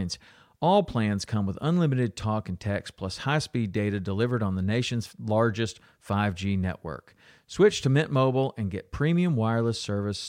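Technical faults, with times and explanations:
No technical faults can be heard anywhere in the recording. Nothing in the audio calls for a time or an explanation.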